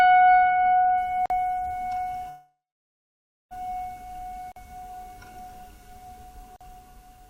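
At 1.26 to 1.30 s a 44 ms hole interrupts the sound: a gap between chunks, silence left at the join of 2 s chunks, with nothing lost.

From 2.29 to 3.53 s the last sound is drawn out and fades, then 930 ms of silence follows before the audio resumes where it stopped. This is a call audio freeze, likely from delayed packets emptying the jitter buffer. Unlike the brief chunk holes, it lasts over a second and has a fading tail.

The same 44 ms chunk gap recurs at 4.52 to 4.56 s and 6.56 to 6.61 s, short and identical each time.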